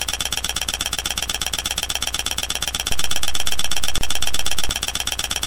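The waveform's zero line shifts in a DC step at 2.92 s, as an offset enters the signal path, then ends at 4.69 s. Each shift is heard as a low thump or click while the sound itself carries straight on. At 3.98 s, separately encoded pieces were joined without trimming the encoder delay and padding. This leaves a gap at the join of encoded pieces: a 31 ms gap with smeared edges cuts into the continuous sound, which then resumes where it stopped.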